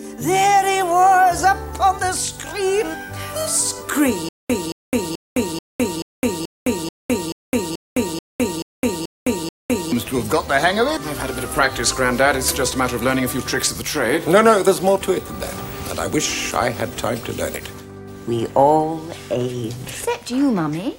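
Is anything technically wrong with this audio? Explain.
Yes. From 4.29 to 9.92 s, a stutter with silent gaps: a 223 ms fragment repeats 13 times with 210 ms of digital silence between, likely a stalled stream replaying its last buffer.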